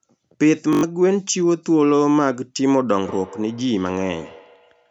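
At 0.73 s the speech breaks into a brief machine-gun buzz, a short slice of sound repeating over and over, until it resumes at 0.83 s as if it had kept playing underneath. That is Bluetooth stutter. About 100 ms of audio never arrived in time, which points to roughly five lost packets, and the receiver kept replaying its last buffer to fill the gap before fresh data caught up.

From 2.92 s to the end, each stretch of speech comes back as a thin, ringing repeat at a steady interval of roughly 150 ms, sitting about 20 dB below the direct sound. This is feedback echo between two devices. Two devices in the same room are joined to the call, and one plays out what the other's microphone captured. That microphone picks the playback up again, and neither echo canceller can remove it because each only cancels its own device's output. The whole clip sounds band-limited, which matches the call microphone processing, with nothing above 8 kHz.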